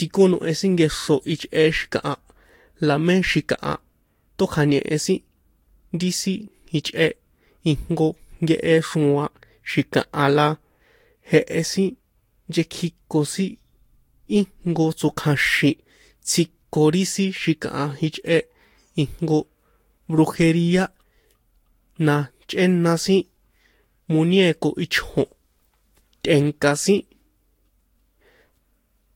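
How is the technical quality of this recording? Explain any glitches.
Throughout the speech there is an audible fault, generation loss. The sound is swirly, smeared and hollow, consonant attacks are blurred, and nothing is present above 16.6 kHz. This likely comes from lossy encoding repeated a few times, each pass on a shifted frame grid piling up fresh quantisation noise and spectral holes, which fits Vorbis at around 60 kbit/s.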